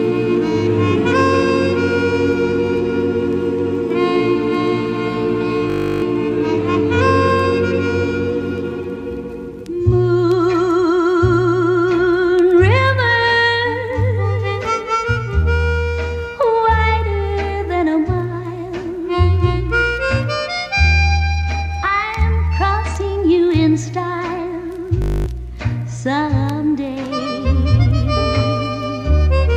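System hang loop at 5.70 to 6.02 s and 25.02 to 25.26 s: the system stalled while the audio hardware kept replaying the same 20 ms buffer, so the sound becomes a steady 50 Hz buzz and a few tenths of a second of audio are lost each time.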